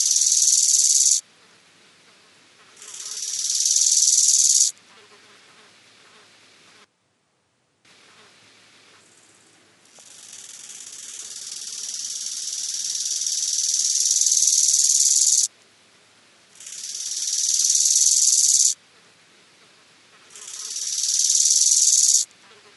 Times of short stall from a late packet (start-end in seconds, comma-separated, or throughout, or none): none